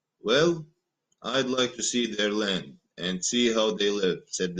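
No technical faults can be heard anywhere in this recording.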